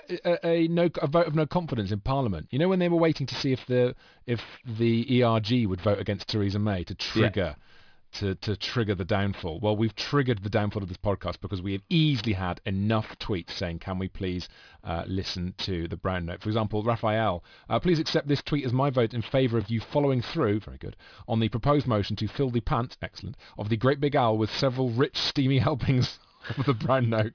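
Throughout the speech, aliasing folds unfiltered highs back below 5.5 kHz, making sibilants gritty; the spectrogram shows energy pressed against that edge, mirrored components roughly 20 dB down.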